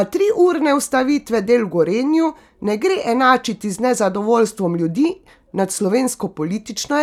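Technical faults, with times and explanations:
Nothing in this speech recording stands out as a technical fault; it comes across as steady and undisturbed all the way along.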